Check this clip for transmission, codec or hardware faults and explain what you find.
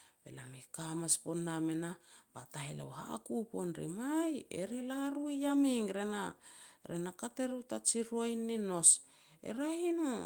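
Nothing in this speech recording points to a transmission, codec or hardware fault.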